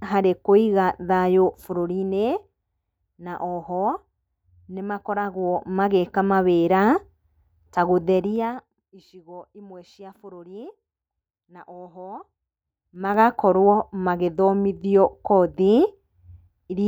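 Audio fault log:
1.44–2.60 s, 5.06–5.94 s, 8.08–8.96 s and 12.77–13.19 s: zipper noise. During each level move (down about 10 dB, up about 10 dB, down about 20 dB, then up about 20 dB) the gain changes in discrete jumps roughly twenty times a second instead of gliding. Every jump puts a small discontinuity in the speech waveform, so a rapid ticking, zipping texture rides on the speech until the level settles.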